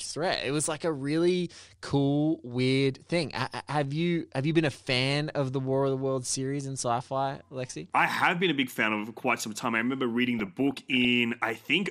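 Throughout the speech the sound is dull and plainly gurgling, with a granular roughness as upper bands flicker in and out. This is MP2 compression, likely at a low rate around 80 kbps, where too few bits force whole high sub-bands off and coarsely quantise the rest.

From 10.39 to 11.05 s, just after "time I remember reading", bubbling chirps and squelches break over the speech. This is DAB burbling: bit errors in the MP2 stream, at a rate well under one percent, slipped past error correction, putting short blips of noise into single sub-bands.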